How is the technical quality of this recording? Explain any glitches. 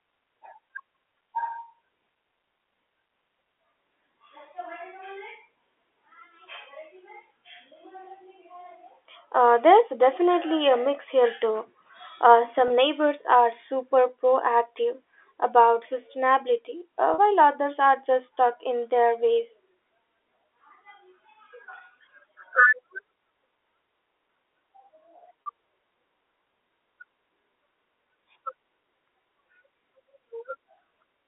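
The recording has three short dropouts, each patched over. The speech runs through a G.711 telephone line, heard as narrow audio between 300 Hz and 3.5 kHz.

Packet loss with pitch repetition occurs at 12.68–12.70 s, just before "neighbors are super proactive". It happens again at 17.14–17.18 s, between "proactive about sustainability uh" and "others are just stuck", and once more at 25.45 s. Missing audio was filled by repeating the last pitch period. The first gap, about 20 ms, fits one lost packet. The later two, about 40 ms each, fit two lost packets. Each sounds like a brief, slightly held, buzzy tone.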